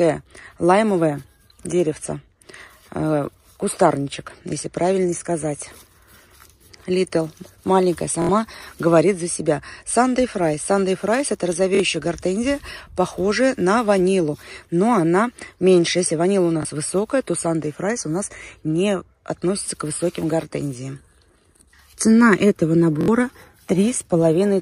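New audio reached the device late four times, causing a repeated buffer. A 23 ms piece, which fits a 1024-sample buffer, replays three times at 8.22 s, twice at 11.75 s, once at 16.63 s and three times at 23.01 s, each a hard-joined stutter.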